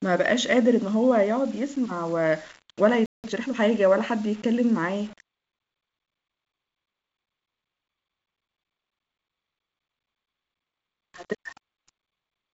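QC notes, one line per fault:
Throughout: low bit depth without dither, the speech sounds grainy, with gritty distortion following its level, likely from rounding to about 6 bits, leaving noise only about 30 dB down.
3.06 to 3.24 s: playback stall, sound just drops out for about 180 ms mid-flow, likely the player running dry or its thread getting blocked.
3.24 to 3.60 s: time-compressed catch-up, the speech rushes at 1.5x with pitch unchanged as small chunks get cut and cross-faded.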